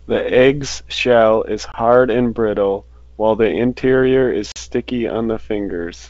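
Packet loss on an ADPCM call at 1.72 s and 4.52 s leaves hard-edged silent gaps of 20 and 40 ms. The decoder's adaptive predictor drifts out of step, so the speech returns slightly distorted before settling.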